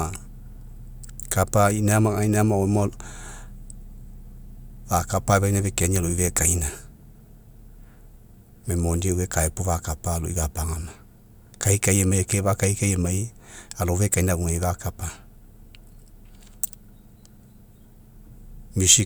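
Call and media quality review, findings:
Call and media quality review findings: no faults found in this speech recording.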